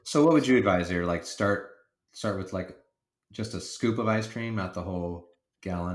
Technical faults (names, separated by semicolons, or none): none